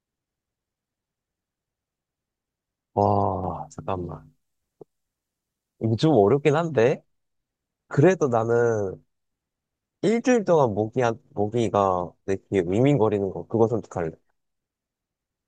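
From 3.44 to 6.59 s, pre-emphasis is left on: the 50/15 µs treble boost lacks its matching de-emphasis, lifting 10 kHz about 8 dB, so the speech sounds thin, bright and sibilant.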